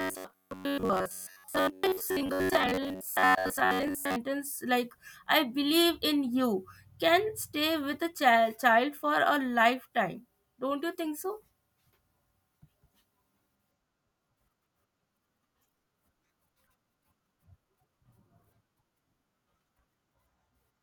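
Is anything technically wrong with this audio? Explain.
Yes. From 0.01 s to 4.16 s the speech takes on robotic sound from repeated short buffers: a rigid, metallic buzz pitched near 93.8 Hz that still roughly tracks the syllables. The likely cause is new audio arriving too seldom, so the playback software keeps looping the last fragment, about 10.7 ms long to match that buzz, in place of the missing material. Well over half of the stretch is these repeats, which imposes the fixed pitch and skips the real speech underneath.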